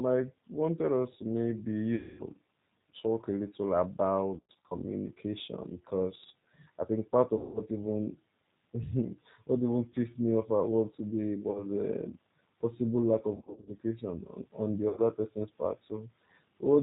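G.729 codec throughout: speech passes through an 8 kbit/s pulse-and-filter model with nothing above 4 kHz, leaving it muffled, rough and plainly synthetic. VoIP packet loss concealed by the speech codec occurs at 1.96 to 2.23 s after "us to maybe you", 4.37 to 4.75 s, 7.37 to 7.62 s, 11.51 to 11.67 s before "a possible lack", 13.35 to 13.73 s, and 14.89 to 15.01 s between "on on the" and "person's part". Each time the decoder stretches its last pitch and filter into a fading buzz or coloured noise, and the voice stays weakened briefly afterward.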